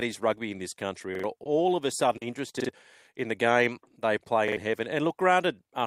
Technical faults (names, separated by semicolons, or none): repeated buffer; short concealed packet loss